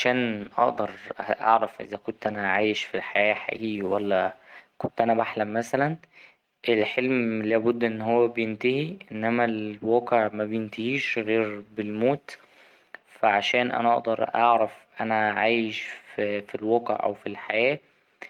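From 0.34 s to 4.09 s, a call bitrate drop: the bandwidth estimate fell, cutting the encoder from 32 kbps to 17 kbps for about 3.7 s. The speech is coded more coarsely, turning rough, watery or muffled, then clears as the rate recovers.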